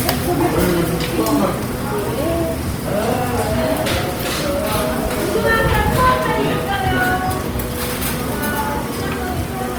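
Throughout, Opus compression is plainly audible. Tones sound grainy, rough and noisy. Bandwidth still reaches 20.3 kHz. The damage likely fits CELT mode near 24 kbps.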